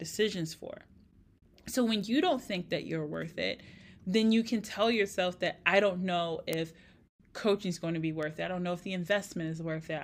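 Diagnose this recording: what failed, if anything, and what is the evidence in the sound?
Word clock ticks at the digital interface, where a receiving device runs on its own clock rather than locking to the sender's. Short, sharp ticks repeat at a steady rate of about one every half second, roughly twenty of them from 0.32 s to 9.92 s across the speech. Each marks the two clocks slipping past each other by a single sample, which fits a small clock mismatch of some tens of parts per million. Buffer underruns would leave audible gaps at irregular times. These ticks stay evenly spaced.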